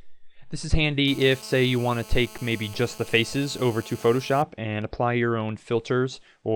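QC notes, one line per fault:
1.08–4.42 s, GSM phone buzz: steady, raspy 217 Hz buzz, rich in harmonics, about 21 dB down. The audio circuit rectifies a nearby phone's call bursts.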